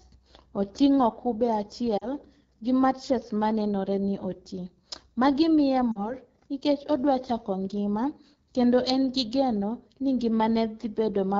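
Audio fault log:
throughout: AMR wideband (HD Voice) codec, rough, raspy speech, which fits AMR-WB at about 8.85 kbit/s; the grit is constant, unlike the brief lost-frame dips.
1.98–2.06 s and 5.92–6.13 s: lost AMR speech frames, a short warble and fade, each about 40 ms, which fits two dropped frames concealed by the decoder; the second recovers weakly before "nikech odwa".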